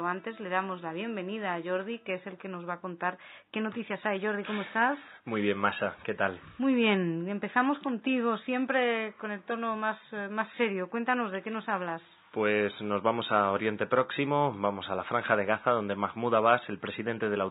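No technical faults are audible.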